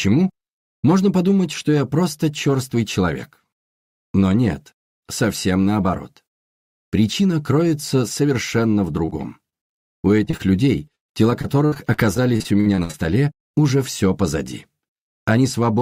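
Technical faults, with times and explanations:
9.05 to 9.13 s and 9.49 to 9.54 s, short concealed packet loss: three brief drops, each about 20 ms missing, patched by extending the last sound, so you get quick smears or wobbles.
9.98 to 10.41 s and 10.95 to 12.95 s, repeated packet loss (robotic sound): holes keep coming, gaps up to 131 ms in the second run, and the repeated patching turns it choppy with pieces missing.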